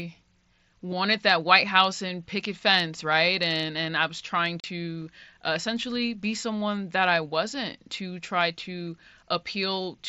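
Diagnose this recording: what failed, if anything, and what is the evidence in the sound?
A hard-edged hole of about 40 ms opens in the speech at 4.60 s, right after "and I was trying". This is unconcealed Bluetooth headset packet loss on the wireless link: a burst that fits roughly five lost mSBC frames was replaced by silence, with nothing to smooth the gap.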